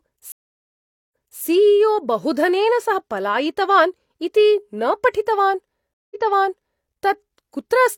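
At 0.32 s the speech cuts out for about 0.8 s and then resumes 0.3 s earlier. At 5.94 s a 0.17 s gap rewinds 0.77 s. Both are stream reconnects: the connection dropped, a fresh decoder restarted mid-stream, and the server resent audio already played.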